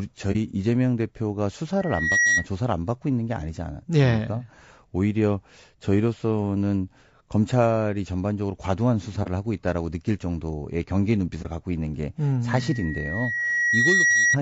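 A speech recording with three kinds of technical fault. Throughout, the voice sounds rough and grainy, with noise filling the gaps between pitch harmonics and a thin, somewhat synthetic top band. This is plainly audible codec damage, likely from low-delay AAC compression (AAC-ELD) at a bitrate in the region of 32 kbps. At so low a bitrate the encoder runs short of bits and smears the spectrum. There are three instances of AAC frame loss with muting, at 0.32–0.36 s, 9.23–9.28 s and 11.42–11.46 s. Each is a brief soft-edged dropout of about 30 ms, consistent with a single lost frame whose spectrum the decoder zeroed. Because the overlapping windows fade the audio out and back in, these gaps register as brief dips. A loudspeaker feedback squeal appears twice as a 1.9 kHz tone. The first runs from 1.80 s to 2.46 s and swells up over roughly 0.4 s. The second runs from 12.55 s to 14.37 s and builds more slowly, over about 1.5 s. 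At its peak each tone sits around 5 dB above the speech. The squeal comes from a microphone picking up a loudspeaker it feeds, with loop gain exceeding unity at that one frequency, so the tone grows by itself until the loop is broken or limited.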